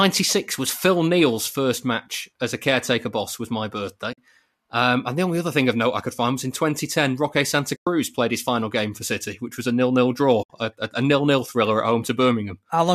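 Speech with three short silences from AAC frame loss with muting, at 4.13 to 4.18 s (50 ms), 7.76 to 7.87 s (110 ms, just before "played his final game") and 10.43 to 10.50 s (70 ms, just before "a a"). Each gap fades out and back in smoothly, which sets it apart from a hard buffer dropout. The decoder zeroed the missing frames, and the lengths fit the roughly 10 ms frames of low-delay AAC, likely the codec in use.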